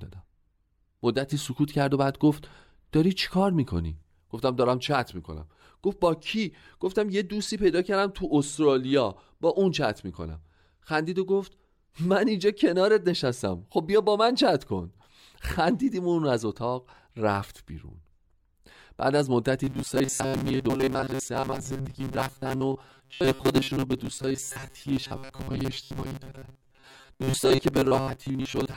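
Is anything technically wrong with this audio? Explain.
Yes. From 19.64 s to the end at 28.76 s, the speech becomes robotic sound from repeated short buffers, a rigid metallic buzz at 134 Hz. The likely cause is roughly 7.5 ms chunks replayed for most of the time, since no new audio arrived. A spectrogram shows flat, evenly spaced harmonics at multiples of 134 Hz, and the waveform shows identical short cycles repeating.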